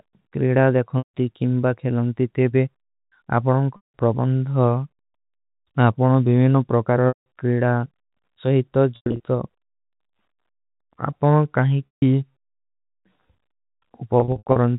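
At 0.98, 3.76, 7.08, 8.96, 11.86 and 14.2 s, the speech briefly holds a buzzy, frozen tone that fades into a gap before resuming with a quick cross-fade. This is packet loss with pitch repetition: roughly 160 to 220 ms of audio went missing each time, and the receiver filled the hole by repeating the last pitch period and fading it out. At 8.96 and 14.2 s the losses are scattered across 240 and 360 ms. The underlying G.711 telephone band is audible throughout.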